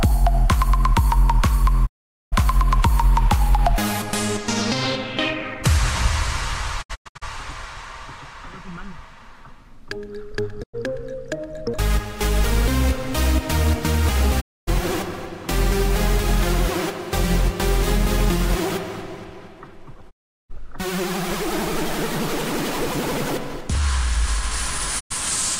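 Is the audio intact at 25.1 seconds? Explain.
No. A digital broadcast dropout runs from 24.99 to 25.12 s. The receiver lost valid frames and muted, so the sound fades out over about 20 ms into silence. About 96 ms of programme is missing, which fits roughly three lost frames.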